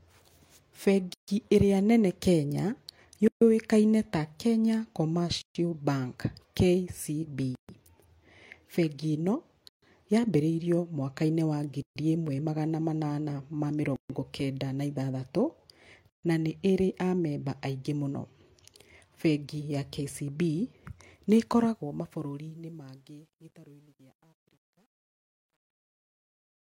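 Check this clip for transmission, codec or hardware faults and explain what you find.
The speech has two faults: a recurring gap at a join of encoded pieces, and truncation distortion on the closing fade.

The gaps open at 1.14, 3.28, 5.42, 7.55, 9.69, 11.82 (before "ĩmwe magana manana ma"), 13.96 (between "ĩmwe magana manana ma" and "kenda na ithathatũ") and 16.10 s (before "na nĩ"). Each lasts about 136 to 140 ms. Separately encoded segments were joined untrimmed, so each one's leading encoder delay and padded final frame remain. The speech drops out abruptly, then resumes where it stopped. On a waveform these are flat silent slots. On a spectrogram they are vertical blank bands with slightly smeared edges.

Truncation distortion runs from 21.42 s to the end, through the fade-out. The fade was computed at about 10-bit resolution without dither, so low levels collapse into coarse square steps. 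From 22.96 s the quiet tail turns gritty. The waveform shows a staircase, and the spectrogram shows broadband speckle.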